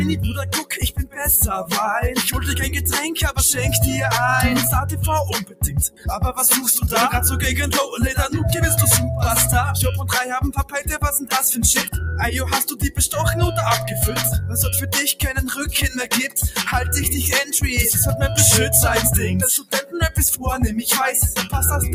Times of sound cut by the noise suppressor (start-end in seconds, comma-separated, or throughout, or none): 0.63-1.22, 5.42-6.07, 10.58-10.74, 12.69-12.99, 16.28-16.61, 19.59-19.95